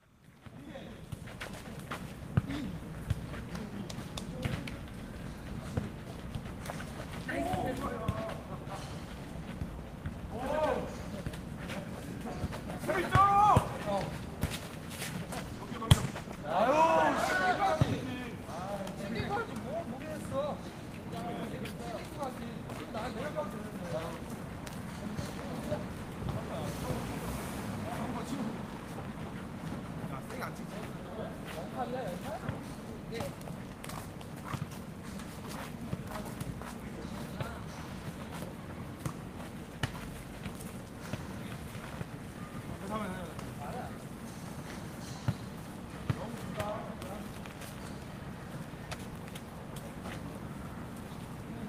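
From 15.54 to 18.73 s there is a call bitrate drop. The bandwidth estimate fell, so the encoder coded coarsely. The sound turns rough and watery, with dulled highs. This fits a fall from 32 to 15 kbps, held lowest for about 1.4 s.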